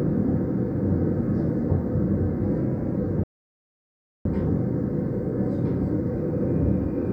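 A playback stall cuts this sound recording from 3.23 s to 4.25 s, leaving about one second of silence in mid-flow. The likely cause is the player running short of buffered data, or its output thread being blocked, so nothing reached the output until it recovered.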